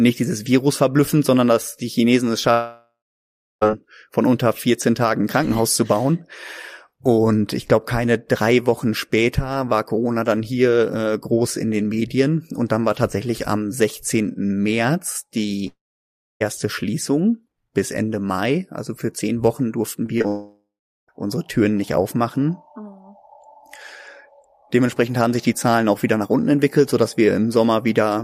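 At 2.51 to 3.63 s about 1.1 s of speech goes missing. The last sound stretches into a fading buzz, then about 0.65 s of near-silence, before audio resumes at "von unter" with the lost part simply gone. The same pattern recurs at 15.67 to 16.42 s, with about 0.74 s missing and about 0.64 s silent. The likely cause is a long network dropout, where nothing arrived for the receiver to play and it could only extend the previous sound.

Around 20 s there are three short concealed packet losses, at 20.06 to 20.10 s, 20.18 to 20.22 s and 20.22 to 20.26 s, each about 20 ms of missing audio. The decoder bridged each gap by continuing the preceding sound and blending back into the real signal. They are heard as quick smears or wobbles, and the last two run together.

Immediately after, at 20.28 to 21.10 s, a third likely long network dropout removes about 0.8 s. It has the same fading tail, followed by about 0.39 s of silence.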